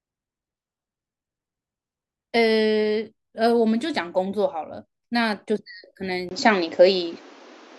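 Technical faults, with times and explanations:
6.29 to 7.79 s, input switched to a poorer device: for the last stretch of this speech clip the sound drops out for about 20 ms and comes back narrower, with nothing above 7.6 kHz, a level shift of roughly 5 dB and a new, fairly quiet noise floor sitting well below the signal. The likely cause is the recording moving to a different microphone or headset. What separates this from a filter or codec change is that tone, level and background noise all change together at one instant and stay that way.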